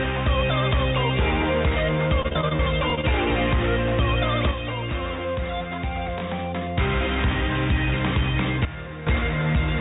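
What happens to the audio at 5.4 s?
A sudden gain jump runs from 4.51 to 6.77 s. Sound and noise drop about 6 dB together, likely from an unramped gain change, showing as abrupt waveform steps.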